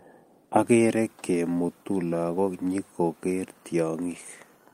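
Nothing in this short bit of speech stands out as a technical fault; it just sounds the way it should all the way through.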